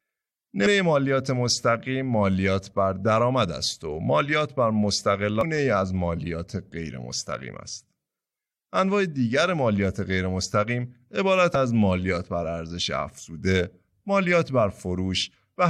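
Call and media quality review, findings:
Damaged data in a compressed stream: short bursts in speech at 0.65 s, 5.41–5.43 s and 11.54 s. Each burst is about 20 ms. Probable component is the decoder input. Corrupt bytes are misread as frame data, and the decoder loses sync until it finds the next valid frame header. Distinguished from network packet loss because the fault comes from misdecoded corrupt bytes and lost frame sync rather than from missing packets and concealment.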